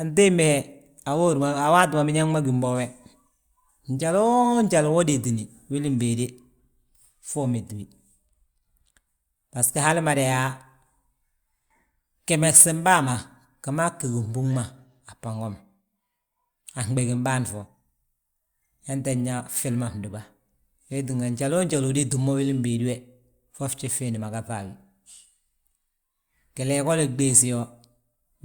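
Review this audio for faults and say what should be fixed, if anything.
Nothing in the signal needs fixing, as the speech recording shows no technical faults at any point.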